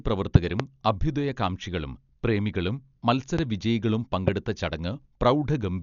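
Dolby Digital compression affects the whole clip. The speech is dull, with nothing above 7 kHz, and a rough, fluttering noise clings to voiced tones. This heavy damage likely comes from a starved encoder, consistent with about 48 kbps, that narrows the band and fills bare frequency lines with dither noise.

A loud pop first strikes from 0.35 to 0.62 s as two pops in quick succession, roughly 25 dB above the speech. Single pops follow at 3.39 to 3.41 s (about 15 dB) and 4.28 to 4.30 s (about 20 dB). Each is likely a sudden voltage step or pulse added to the signal. It is heard as a sharp thump over speech that carries on underneath.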